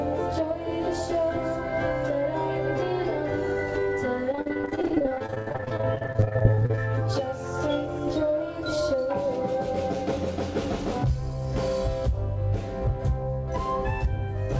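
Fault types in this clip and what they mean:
Repeated packet loss (robotic sound): between 4.32 and 6.79 s, packets in the call path kept going missing or arriving too late. Each hole was patched by extending the last sound that got through, and then the next dropout followed. About 50 gaps fall in that stretch, the longest 82 ms, and concealment covers 43% of it. The audio turns choppy and robotic with pieces missing, over a band that stops at 8 kHz, as a wideband call codec would.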